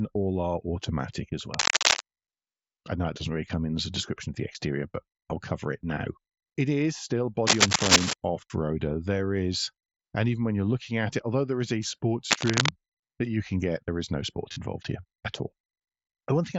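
From 1.54 to 2.00 s there is cable scratch noise, rough rustling a little louder than the speech, likely from a worn connector being moved. At 5.94 s, just after "but I'll cover it", there is concealed Bluetooth headset packet loss. A gap of about 23 ms is filled by repeating recent waveform, which fits three lost frames. From 7.47 to 8.13 s, between "it is still" and "off roader", the same scratching returns above the speech. From 12.30 to 12.73 s, between "there is a sports" and "that you can get", it comes back at about speech level. At 14.52 s a longer patch of about 38 ms is filled in. It gives a brief buzzy hold and a slight warble as the real audio resumes. The headset's mSBC wideband codec adds only light graininess.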